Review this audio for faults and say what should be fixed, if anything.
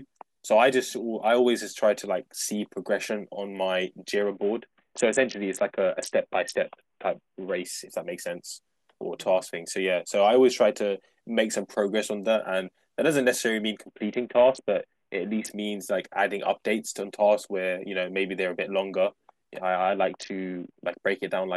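Three Bluetooth SBC bit pool drops degrade the speech, at 4.22 to 7.65 s, 13.87 to 15.50 s and 19.77 to 20.83 s. Each sounds like the link starving the encoder, which fits the bit pool falling from 28 to 5, near 54 kbps. The upper sub-bands lose their bits, so the treble dulls, and the remaining bands are coarsely quantised into gritty noise. On a spectrogram the energy above the lower sub-bands cuts off abruptly for each span, with speckled noise filling the bands that are left. The waveform's envelope stays intact. Preventing this means reducing radio congestion or interference near the headset, or pinning a higher minimum bit pool so the encoder cannot fall this far.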